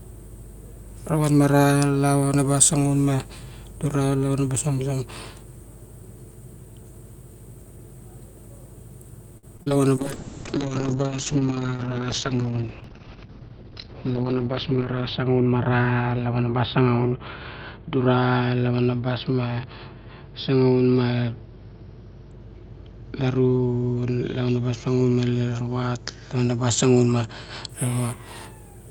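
A speech recording with repeated packet loss (robotic sound) from 9.37 to 9.72 s. Several short dropouts, the longest about 56 ms, are patched by stretching the preceding sound, so over a third of that span is synthetic fill and the speech turns choppy. A call bitrate drop follows from 9.97 to 27.75 s. The audio becomes rough and muffled, with high frequencies cut from about 20 kHz down to about 6 kHz, which fits an encoder rate falling from roughly 48 to 7 kbps and holding at its lowest for about 5 s.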